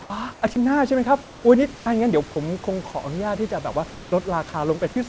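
Comfort noise replaces the background at 0.02–0.10 s and 0.34–0.42 s: the real room noise gives way to steady, featureless hiss, about 4 dB and 2 dB quieter, likely from discontinuous transmission.

Sound dropped by the voice detector at 0.54–0.56 s: about 10 ms of sound vanishes into flat noise, likely because the detector misjudged it as background.

Comfort noise again at 1.22–1.44 s, about 3 dB down, smoothing the background into uniform hiss.

Sound dropped by the voice detector at 1.76–1.86 s: about 50 ms of sound is lost and replaced by steady noise until the detector triggers again.

Comfort noise at 3.90–4.12 s, only about 1 dB quieter but stripped of the room's texture. Throughout, the call path's band limit leaves nothing above 8 kHz.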